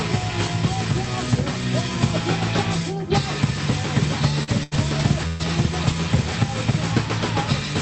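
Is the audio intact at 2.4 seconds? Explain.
Yes, the audio is intact at 2.4 s, with no dropout, glitch or other fault at that moment.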